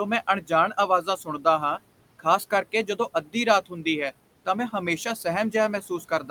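From start to end the speech carries noise suppressor artifacts. The room noise, about 19 dB below the speech, drops by about 18 dB between phrases and returns under each one. Unlike a noise gate's abrupt switching, the level shifts track the speech band by band, frame by frame.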